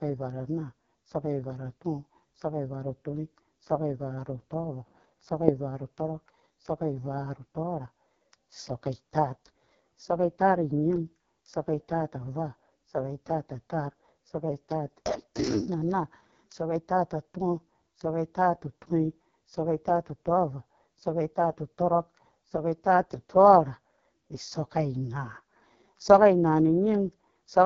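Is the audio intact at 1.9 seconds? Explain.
No. At 1.9 seconds, as for the whole clip, the speech passes through the AMR wideband (HD Voice) codec at a very low rate. The heavy damage points to the lowest 6.6 kbit/s mode. The coder models the voice with a pulse-excited vocal tract filter up to 6.4 kHz and substitutes shaped noise above that, leaving nothing above 7.4 kHz. At this rate the model is too coarse, so the voice sounds rough and raspy.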